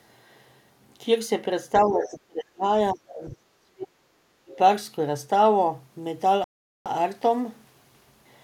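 From 1.82 to 2.63 s, 2.92 to 4.23 s and 4.43 to 4.53 s the speech sinks by roughly 25 to 35 dB, the deepest around 3 to 4 s. This is speech suppressed in double talk, likely an echo canceller ducking the near talker while the far end spoke.

Between 2.03 and 2.09 s a brief scrap of the other side's voice leaks through, about 15 dB below the speech. It is likely loudspeaker echo left behind by the canceller, heard as a separate, faint second voice rather than a change in the talker's own sound.

From 6.44 to 6.86 s the audio cuts to complete silence for 416 ms, then resumes. This is a Bluetooth stall, likely the headphones' buffer running dry under interference. It is a clean gap with no thinning or dipping, which sets it apart from the suppression.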